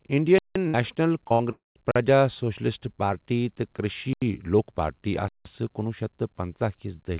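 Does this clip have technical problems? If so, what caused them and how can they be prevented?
Yes. Block of digital silence: hard cuts to silence at 0.38–0.56, 1.91–1.96, 4.13–4.22 and 5.28–5.45 s. Lengths fit buffers of 2048 to 8192 samples left unfilled. Prevention: give the audio thread enough time and larger buffers.

Burst of packet loss: at 0.68–0.77 and 1.33–1.43 s, the last sound is held and fades. About 60 ms goes missing each time. Prevention: use a steadier network and forward error correction.

Short concealed packet loss: at 1.28–1.33 s, a brief smear fills about 30 ms that never arrived. Prevention: use a larger jitter buffer and redundant packets.

Long network dropout: at 1.52–1.78 s, a fading continuation gives way to about 160 ms of silence. About 240 ms is lost, likely because no packets arrived. Prevention: use a more reliable connection with retransmission.

The G.711 A-law call path has nothing above 4 kHz, as that codec intends.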